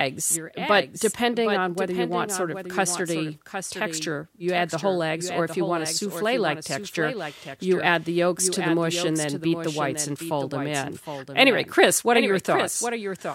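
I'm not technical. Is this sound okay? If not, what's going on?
No. Throughout this speech, a second, quieter copy of the same audio plays roughly three-quarters of a second behind the first. This is a doubled audio track, likely from the sound being picked up twice, once through a slower route. Unlike an echo in a room, the late copy doesn't fade or repeat. It is one clean, full-sounding duplicate at a steady delay, so each phrase seems to be spoken again just after itself.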